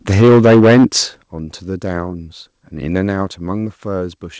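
From 0.09 to 0.85 s the speech shows microphone overload, likely from an input volume set so high that the peaks drove about 10 dB past the converter's ceiling. Roughly a third of the samples in that stretch are flattened at the limit, so the loudest syllables come through with a harsh, crackling edge instead of rounded peaks.

The microphone volume stepped down twice while that was happening and just after. At 0.22 s the level drops by about 2 dB, and at 1.23 s by about 9 dB, likely the call software's automatic gain pulling the device input down in single jumps after detecting the clipping. Both voice and background fall together at each step. The second is the larger sudden drop in loudness. The sound reaches us through a G.722 call path, which accounts for the absence of anything above 8 kHz.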